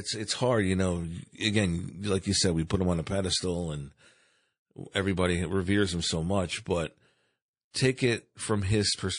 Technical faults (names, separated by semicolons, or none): MP3 compression; pre-echo